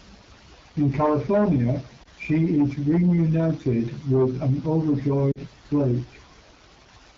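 Throughout, the speech has a rough, raspy edge, with the upper band hissy rather than crisp. That points to the AMR wideband (HD Voice) codec running at one of its lowest modes, which fits 8.85 kbit/s, where too few bits remain to model the voice cleanly.

At 2.03 to 2.08 s there is a brief dip and warble, and at 5.32 to 5.39 s a slightly longer fading stretch that drops to near silence. These are lost AMR speech frames: the decoder patched about 20 ms, then about 40 ms, by repeating the last good settings at falling gain.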